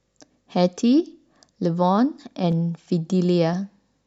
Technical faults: clock drift buffer slips

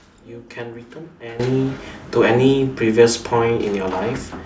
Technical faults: sudden gain jump

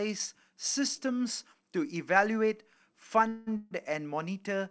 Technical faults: call audio freeze

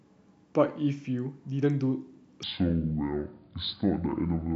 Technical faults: section at the wrong speed

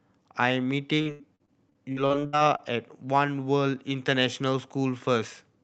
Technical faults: repeated packet loss (robotic sound)

